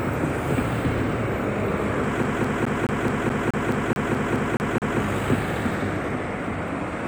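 From 2.23 to 5.0 s the audio falls into a CD stuck on one turn. A scratch keeps knocking the laser back one track at the same point on each revolution, so the same 213 ms fragment plays 13 times, with a brief mute at every jump. The result is a fast, perfectly even stutter. Unlike a buffer or packet-loss repeat, which tends to vary in length and spacing, this loop never drifts in timing.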